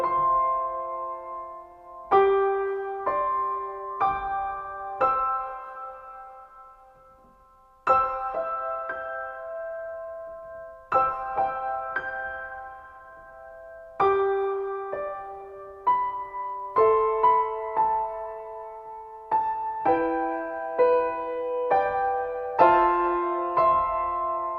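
From 15.4 to 18.4 s there's a 20 Hz ticking buzz: the resampler restarted on every block, each 50 ms chunk converted alone, probably 44.1 to 48 kHz, leaving errors at every edge.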